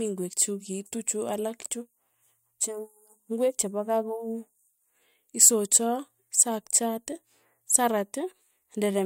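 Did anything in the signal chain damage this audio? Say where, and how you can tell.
No, nothing damaged this audio.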